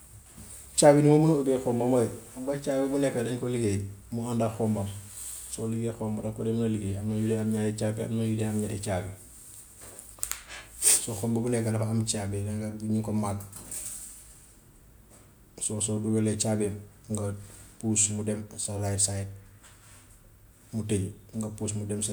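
No technical faults are audible anywhere in this speech recording.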